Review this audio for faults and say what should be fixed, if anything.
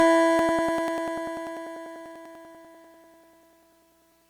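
Periodic USB or driver dropouts tick through the music from 0.39 s to 4.22 s, one every 98 ms, around forty in all. Each time, roughly 2 ms of audio is skipped outright, so the waveform jumps and clicks at a steady rate. Prevent this by finding and rescheduling the background process stalling the USB bus or driver, and by using a larger buffer.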